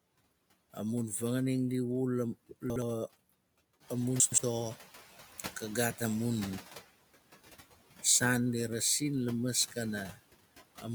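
A speech clip with a noise suppressor working on it the whole way through, and you can hear its artifacts: it's pulling the room noise down by about 17 dB, so the background sinks in the gaps and comes back up under the talking. There are also two spots where chunks play out of order. At 2.7 to 2.82 s a 60 ms chunk lands one slot late and swaps places with its neighbour, so you get a quick jumbled blip. At 4.2 to 4.38 s a 60 ms chunk turns up two slots late, so the scramble spans about 180 ms. Around 4 s the room noise steps up by about 13 dB, and from 3.8 to 5.09 s the noise suppressor is catching up. Its noise estimate is still tuned to the quieter background, so for that 1.29 s stretch it only knocks the noise down by about 9 dB and you hear the noise swell. It then settles back in just before "kagaat amun", once the estimate has adapted.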